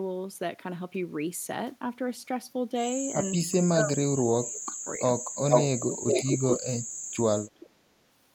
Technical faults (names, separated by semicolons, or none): speech suppressed in double talk; echo leak